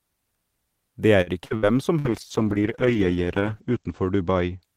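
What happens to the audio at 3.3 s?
The speech sounds muffled and rough there, from a call bitrate drop starting at 2.05 s: the encoder falls from 64 to 10 kbps and cuts everything above 8 kHz.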